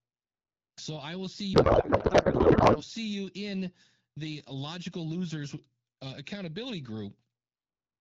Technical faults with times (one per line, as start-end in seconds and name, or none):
1.54-2.82 codec payload misread